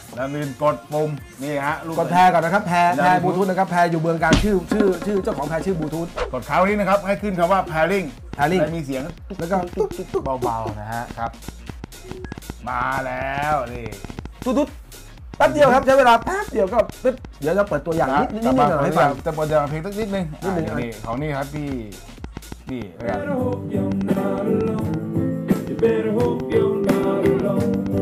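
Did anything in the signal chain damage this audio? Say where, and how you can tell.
Yes, there's a train of clicks from 8.34 s right through to 27.99 s: about five ticks a second at an uneven pace, somewhere around a hundred in all, each peaking about 5 dB above the sound itself and audible in the gaps too. They all share the same shape, so it's one repeating source riding on top rather than damage to the content. The likely culprit is interference pulses coupling into the analogue wiring.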